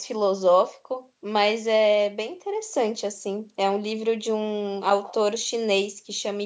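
No technical faults can be heard in this recording.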